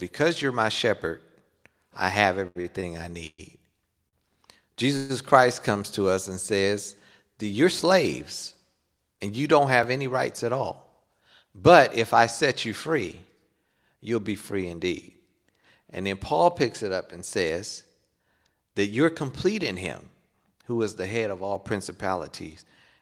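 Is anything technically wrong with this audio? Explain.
Yes, there are several network and playback glitches in this speech.

From 2.47 to 3.40 s there's repeated stalling (stutter): the jitter buffer kept running dry, and four gaps, the longest 117 ms, were filled by stretching the sound, so it drags and catches.

At 4.08 s a short stall from a late packet holds the sound an extra 45 ms before it picks up where it left off.

From 4.97 to 5.11 s the audio freezes into a fading buzz for about 125 ms, then resumes. That's a call audio freeze, likely from packets held up in transit.

At 9.83 and 21.55 s there are blocks of digital silence, 3.1 ms and 1.33 ms, heard as clicks or ticks. The second fits a 64-sample block at 48 kHz that wasn't filled in time.

From 10.05 to 11.44 s and from 17.44 to 17.93 s there's jitter buffer speed-up: small pitch-period slices were trimmed to cut the backlog, roughly a tenth of a second and then around 40 ms, so speech runs about 6% fast at the same pitch and sounds hurried.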